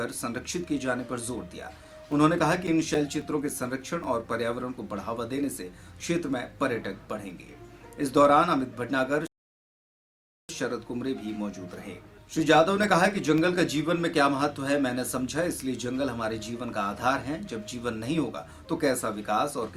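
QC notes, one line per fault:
1.57–4.04 s, CD scratch ticks: A blemish on the disc corrupts more data than error correction can rebuild once per revolution, so the player patches or mutes the damaged samples. This produces about four ticks a second, each only a few milliseconds long, of uneven strength.
11.46–13.38 s, CD scratch ticks: The same kind of damage recurs once per revolution, and the player again conceals the unrecoverable samples. The result is a shorter run of very brief clicks at about four a second, of uneven strength.
9.27–10.49 s, rebuffering stall: Playback exhausted its downloaded audio and paused until more data arrived. The sound drops to silence for about 1.22 s and then picks up exactly where it stopped. Nothing is skipped, but the gap adds that time to the clip.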